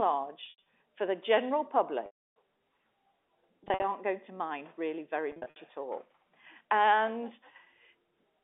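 Packet loss with pitch repetition occurs four times. At 0.46–0.62 s about 140 ms drops out in short runs up to 80 ms, and the bursts are consistent with 20 ms packets. At 2.06–2.3 s, just after "for the general", a solid 300 ms gap occurs. At 3.64–3.84 s, just before "going to mind really", about 120 ms is lost. At 5.32–5.56 s, between "to mind really very" and "at all", about 160 ms is lost. In each gap the receiver loops the last pitch cycle, which sounds like a brief buzzy hold. On the waveform this shows as identical repeating cycles that shrink in amplitude. On a spectrogram the harmonic stripes freeze flat and then fade. In the 300 ms gap they fade to near silence before a short cross-fade back. The band-limited G.711 line, with nothing above about 3.6 kHz, frames all of this.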